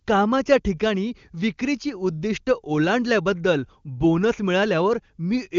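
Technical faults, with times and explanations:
No technical faults can be heard in this speech clip. It has passed through the AMR wideband (HD Voice) codec at a rate that points to 23.85 kbit/s, and nothing is heard above about 7.3 kHz, just above where that codec's band ends at 7 kHz.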